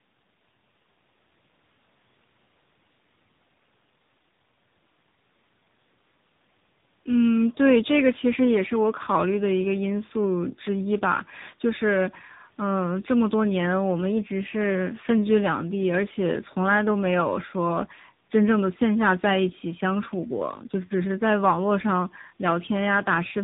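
A speech recording affected by tandem speech coding throughout, with the audio decoded and re-encoded at each network hop. The band stops near 3.8 kHz, so it sounds narrowband and muffled. The roughness and warbly smearing fit roughly three speech codecs in a row, for example CVSD, G.726 and finally AMR-NB near 8 kbit/s. Each coder adds its own error on top of the previous one's.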